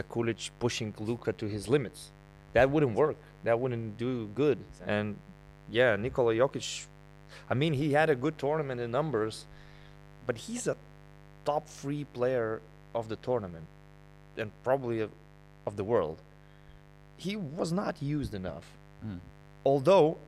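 Mains buzz runs through the clip, about 25 dB below the speech. It is a steady, raspy buzz caused by switching spikes twice per 50 Hz cycle from a dimmer, rectifier or missing shield. The spectrogram shows stacked 50 Hz harmonic lines reaching several kHz, and the waveform shows a spike every 10 ms.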